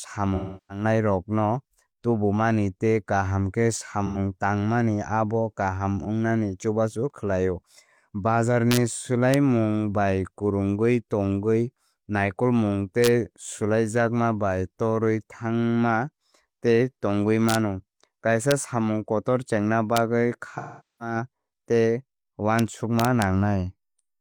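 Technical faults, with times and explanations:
0.35–0.84 s, 4.06–4.18 s (between "kaham khe" and "tangmani abo"), 20.57–21.15 s: AAC frame loss with concealment. Runs of coded frames went missing, roughly 0.34 s, 85 ms and 0.43 s of audio, and the decoder patched each gap from the last good spectrum. That leaves a smeared, noisy, phasey stretch where the speech should be.
8.71–8.77 s, 9.34 s, 13.04–13.08 s, 17.49–17.55 s, 18.51 s, 19.97 s, 22.59 s, 22.99–23.22 s: integer overflow. Loud speech peaks pushed a sum just past the integer limit, by about 1 dB at most, and the value wrapped to the opposite extreme instead of being limited. Each wrap snaps across the full range as a sharp, violent crack, harsher than ordinary clipping.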